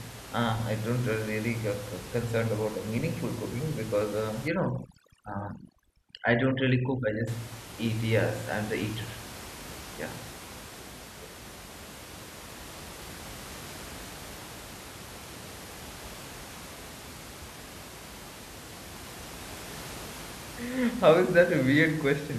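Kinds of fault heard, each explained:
Overdone noise removal: Between 4.48 and 7.27 s, a noise reduction stage clamps down too hard on this speech. Any frequency band that sits close to its noise estimate gets pushed far down or cut out. The room noise, about 15 dB below the speech elsewhere, drops here, with small twinkling specks left behind. Quieter parts of the speech are removed along with it.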